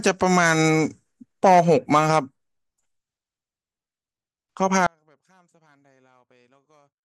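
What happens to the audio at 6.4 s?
At 6.4 s the speech has already dropped out. An audio dropout to a faint residue begins abruptly at 4.87 s and runs to the end of the clip. Only a faint leak remains, roughly 40 dB below normal, likely from signal lost upstream while the path stayed live. On a waveform the envelope collapses to a thin band, and a spectrogram shows near-empty, dim energy.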